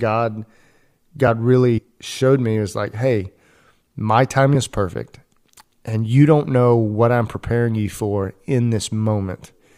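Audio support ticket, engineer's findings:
Small jump in the speech at 1.28 s, a few milliseconds skipped with no gap. Likely a dropped buffer (overrun), with capture not reading samples before hardware overwrote them.

Short glitches at 1.77–1.79 s (before "showed me was like"), 4.54 s (before "is perfect") and 7.34 s (between "don't know what I'm" and "you for"). Damaged data in the compressed stream; the decoder lost frame sync and resynced.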